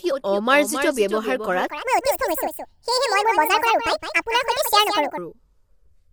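From the first moment, every syllable is shadowed by a fainter, dry repeat about a third of a second behind and around 10 dB quieter. It has no reverb tail, so it is a doubled audio track, likely the same speech mixed in twice, once through a slower path.

Throughout, the speech also sounds rough and grainy, with a hiss filling the gaps between harmonics and a thin, synthetic-sounding top band. This points to low-delay AAC compression. The damage is plainly audible and likely comes from AAC-ELD at a low rate, around 32 kbps.

From 1.67 s to 5.18 s, the speech suddenly turns high and hurried, raised close to ten semitones and running 1.64 times too fast, before returning to normal pitch and pace. This section at the wrong speed likely comes from being played against the wrong clock.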